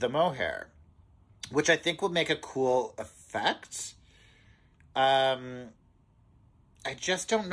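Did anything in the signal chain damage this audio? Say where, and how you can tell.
No, nothing in the chain audibly damaged this audio.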